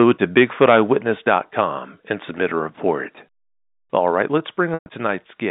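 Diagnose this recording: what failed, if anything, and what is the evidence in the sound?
Converter stage. From 0.37 to 0.77 s the loudest syllables take on a harsh, crackling edge, and it returns briefly at 1.30 to 1.33 s. The peaks are flattened where they meet the converter's limit. The first stretch runs about 5 dB past the limit, with around 2 percent of samples cut. The second is milder, about 1 dB over. This is likely microphone overload: input gain set too high for the converter's range.

Call processing stage. The level drops abruptly three times: at 1.02 s by about 5 dB, at 4.38 s by about 3 dB, and at 5.40 s by about 1 dB. Voice and background fall together, which rules out a change in the talker. The first step follows the clipped peaks closely. This is likely the microphone volume stepped down by the call software's automatic gain control, reacting to a signal it judged too hot.

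Network stage. At 4.74 s about 120 ms of audio goes missing, which points to four lost packets. The receiver fills the start of the gap by repeating the last pitch period, so there is a brief held, buzzy tone. That fades to silence well before the gap closes. The sound resumes at 4.86 s through a short cross-fade. This is packet loss with pitch repetition concealment. The concealment audibly stretches, fades and stitches the audio through the G.711 A-law telephone band.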